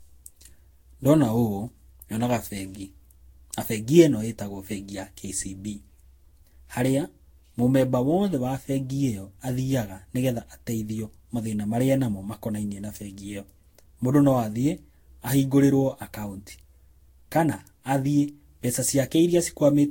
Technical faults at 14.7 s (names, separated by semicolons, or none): generation loss